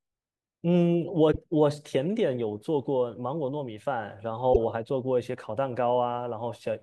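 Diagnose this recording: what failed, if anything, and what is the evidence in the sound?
The failure is at the codec stage: damaged data in a compressed stream. At 1.29–1.37 s and again at 4.50–4.57 s the speech briefly breaks up. Corrupted bytes in those frames made the decoder misread or refuse them until it found the next valid frame header and resynchronised. Network packet loss would instead leave a gap, a smoothed fade or a repeated fragment. Here the decoder lost sync on bad data inside the stream.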